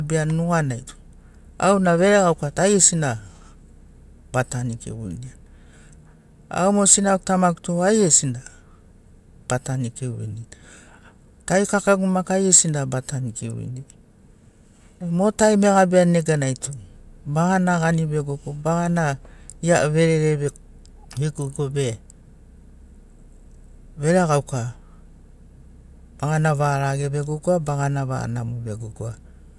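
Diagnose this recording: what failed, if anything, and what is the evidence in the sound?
Nothing failed; no fault is audible anywhere in this speech.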